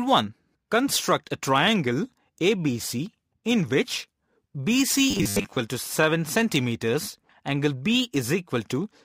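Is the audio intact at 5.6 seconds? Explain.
No, not quite. From 5.11 to 5.59 s there's robotic sound from repeated short buffers, a rigid metallic 100 Hz buzz. It's likely from audio arriving late, with a 10 ms chunk looped to fill the gap and about half the real audio skipped.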